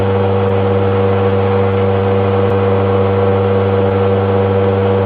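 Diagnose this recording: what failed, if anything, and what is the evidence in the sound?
The failure is at the network and buffer stage of a call: clock drift between sender and receiver. The sender's clock runs about 3 percent slow, so the receiver's jitter buffer keeps draining and never settles. The whole clip carries small timing hiccups at uneven intervals. On a waveform these show as tiny irregular seams. A spectrogram shows brief vertical discontinuities, with nothing above about 12 kHz because the Opus path is band-limited there.

The drift drives repeated timing corrections from 0.13 s to 4.80 s. The receiver repeatedly stretches short pieces, playing the stretch at about 99 percent speed and adding roughly 70 ms in total. Every edit goes the same way, lengthening the sound, but the edits are spaced unevenly. The result is a slightly unsteady tempo rather than obvious clicks. 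A spectrogram shows partials marginally elongated at irregular points, and a waveform shows duplicated cycles spliced in.

Scattered short gaps appear between 0.48 s and 3.16 s. There are around seven of them, each about 10 ms or shorter, together covering roughly 70 ms, or about 3 percent of that stretch. This points to late packets at the network stage, patched by concealment that continues the last sound. Each gap is heard as a brief tick or smear. On a spectrogram each shows as a narrow smeared column where the harmonics freeze briefly, and on a waveform as a short repeated-looking segment.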